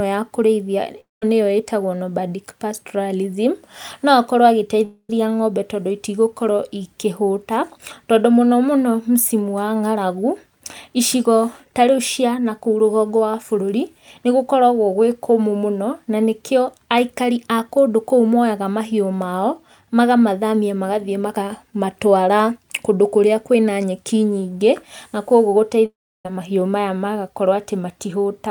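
Three gaps break up the speech, at 1.00 to 1.23 s, 4.85 to 5.10 s and 25.86 to 26.26 s, and they sound like a long network dropout as the likely cause. Each time the audio stops arriving, and the receiver keeps smearing the last sound forward as a buzzy tail that fades into silence. That's about 220 ms, 240 ms and 390 ms lost. Speech then picks up again, but the missing stretch never comes back.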